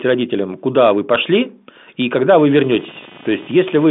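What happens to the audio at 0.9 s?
Nothing goes wrong at 0.9 s: the audio there is intact, carried through the G.726 ADPCM telephone path with its usual narrow band, nothing reaching above about 3.8 kHz.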